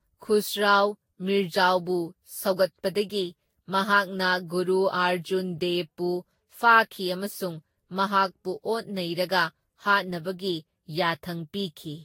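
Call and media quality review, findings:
Generation loss, whole clip. Speech sounds swirly, hollow and smeared. Consonant attacks blurred. Nothing above 16.6 kHz. Likely cause: repeated lossy re-encoding, around seven passes, consistent with a Vorbis chain near 56 kbit/s. Each pass quantises on a shifted frame grid. Noise and spectral holes accumulate. Net result is worse than one encode at that rate.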